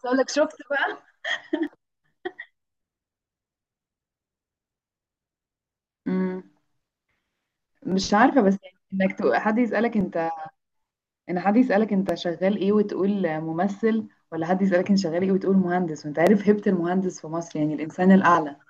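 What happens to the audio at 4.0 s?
At 4.0 s the speech is inside a run of regular clicks that starts at 1.67 s and continues to 18.35 s, one pop every 2.08 s, about ten in all. These are clock drift buffer slips, likely caused by two devices running on separate clocks that disagree by roughly 500 ppm. The buffer between them gradually drifts until a block of around fifty samples is dropped or repeated, and each jump in the waveform is heard as a click.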